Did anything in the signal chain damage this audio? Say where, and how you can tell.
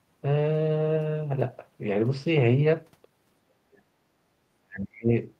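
Yes, the damage happens at the call-processing stage. Speech suppressed in double talk shows up twice, from 3.45 to 3.99 s and from 4.6 to 5.1 s. Each time the speech sinks by roughly 40 dB for around half a second. The likely cause is the far side's voice playing through the loudspeaker at the same moment. The echo canceller could not tell the local voice from the returning echo, so it pulled both down together.

The same echo canceller also ducks the room. Between 4.27 and 4.32 s, the background gated by the echo canceller drops by about 7 dB for roughly 50 ms, then comes straight back. The brief hole in the ambience is the tell. The canceller clamped the microphone while loudspeaker output was present and released it a moment later.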